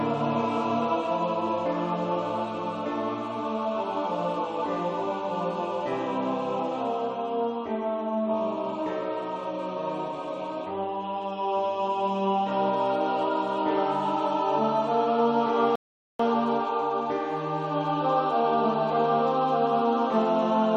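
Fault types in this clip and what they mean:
Rebuffering stall: the player exhausted its downloaded audio and halted until more data arrived. At 15.76 s the sound drops to silence for about 0.44 s, then resumes at 16.19 s exactly where it stopped, with nothing missing but that gap added.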